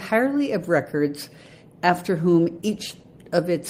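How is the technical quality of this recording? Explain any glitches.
From 1.86 s to 3.13 s the sound turns rough and watery, with the top end dulled, because of a call bitrate drop. The encoder had to code more coarsely and shed high frequencies, which fits a fall from about 32 to 17 kbps that held for about 1.2 s.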